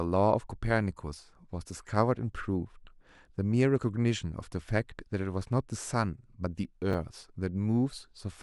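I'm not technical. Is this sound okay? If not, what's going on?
No. At about 6.91 to 6.94 seconds there is a brief jumbled moment. This is called chunks out of order. One 10 ms piece of the sound played two pieces too late. Nothing is missing, but the shuffled order creates hard joins.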